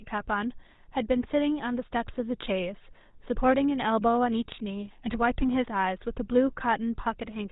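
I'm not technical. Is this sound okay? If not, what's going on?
No. All the way through, this speech has the buzzy, gravelly roughness of the GSM full-rate codec, the first digital mobile-phone voice system. It rebuilds the voice from a simple model driven by evenly spaced pulses, so the voice sounds grainy and rasping. That roughness is what sets it apart from a plain muffled or narrow phone line: everything above 4 kHz is also gone, but the grit comes from the rebuilt voice itself.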